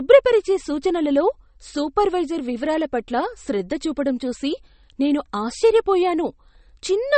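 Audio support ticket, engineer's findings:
Speech, throughout: watery, swirly band-limited sound, treble gone. Likely MP3 compression at a low bitrate near 33 kbps; encoder drops treble, weak frequency lines flicker per frame. Spectrogram: hard ceiling at 8.4 kHz, speckled holes below it; waveform unremarkable.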